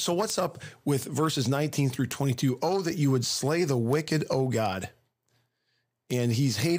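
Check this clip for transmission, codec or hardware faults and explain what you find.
One hardware fault is present: word clock ticks run through almost the whole clip, from 0.30 s to 6.47 s. The receiving device is reading a digital link on its own clock, not locked to the sender, with a mismatch of roughly 70 ppm. Each time the two clocks drift a full sample apart, one sample is dropped or repeated. The result is about twenty sharp ticks of uneven strength, spaced roughly 0.4 s apart over the speech.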